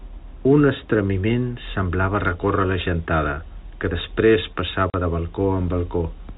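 From 2.09 s to the end of the speech at 6.37 s, pre-emphasis is left on. A treble boost following the 50-microsecond FM curve was applied and the complementary de-emphasis never followed, so high frequencies stand about 10 dB above the 1 kHz level at 10 kHz. The speech turns thin and bright at that point, with sibilants pushed forward and the lower body of the sound receding.

At 4.90 s, within that bright section, there is packet loss filled with silence. The receiver inserted a 40 ms hole where audio went missing, which fits two consecutive 20 ms packets being dropped. The gap starts and ends abruptly, making a brief chop in the speech, ending at 4.94 s.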